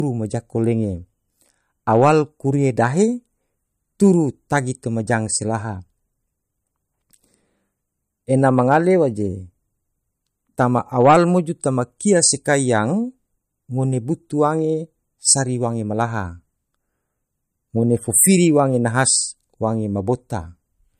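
From start to end, the speech has no content above 15.1 kHz, a hard ceiling that stays fixed for the whole clip. The band below carries the smeared, swirly texture of a lean encode. That combination points to low-bitrate audio saved at a high bitrate: the sound was likely first coded as MP3 at around 50 kbit/s, then re-encoded at a much higher rate, which kept the earlier losses and cut-off without restoring anything.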